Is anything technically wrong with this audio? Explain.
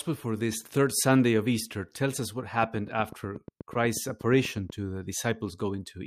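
Yes, a train of clicks from 2.63 to 4.71 s, after "tells us what", with around twenty evenly spaced, near-identical pops at 8.2 per second peaking a few dB over the speech, likely from interference or a faulty connection. That steady rhythm distinguishes it from random crackle.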